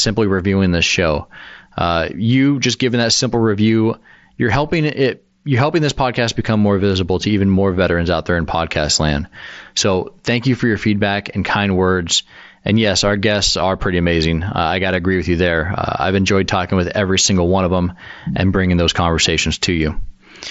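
Nothing's actually wrong here; it's just speech coming over a Bluetooth headset link using the mSBC codec, which carries the sound up to about 8 kHz as that wideband mode is meant to.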